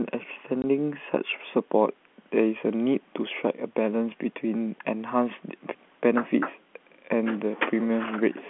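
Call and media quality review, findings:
Packet loss filled with silence, 0.62 s: a 20 ms dropout in the speech with hard edges. This fits one lost packet at a 20 ms packet size. The receiver played silence with no concealment. The G.711 telephone coding band of roughly 200 Hz to 3.4 kHz can be heard around the gap.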